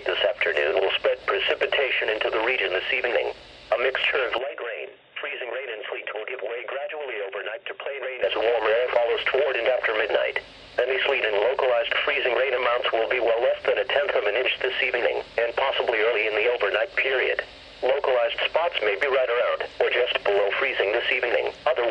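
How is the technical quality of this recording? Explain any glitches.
The recording has one clear glitch, from 4.38 s to 8.23 s. The input was likely switched to a poorer device. Nothing above 3.7 kHz gets through, so the sound turns dull and boxy. It drops roughly 10 dB in level and picks up a faint new noise floor, about 45 dB down. Unlike a plain filtering or bandwidth drop, level, tone and background all change together, with no silence at either switch.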